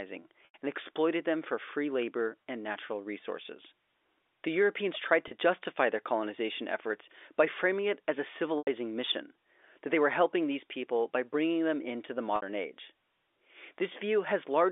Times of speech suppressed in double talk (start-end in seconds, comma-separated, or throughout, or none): none